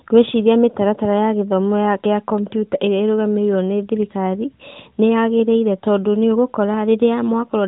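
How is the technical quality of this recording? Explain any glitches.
The speech carries no glitches, and its narrowband, mobile-phone character is the ordinary sound of the AMR narrowband mobile codec, running at a rate that sounds like its top 12.2 kbps mode with only light coding wear.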